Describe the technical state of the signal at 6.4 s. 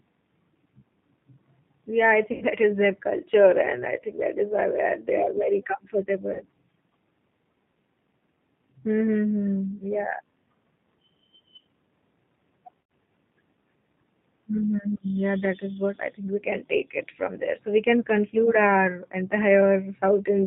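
A stretched sound, a buzzy tone or coloured noise, fades out from 6.34 to 6.44 s, with weak sound after. This is VoIP packet loss concealed by the speech codec: the decoder extrapolated about 60 ms, consistent with two lost packets. Underneath, the sound is band-limited below 4 kHz and plainly rough and synthetic, typical of the G.729 codec at what sounds like 8 kbit/s, rebuilding audio from a filter and sparse pulses.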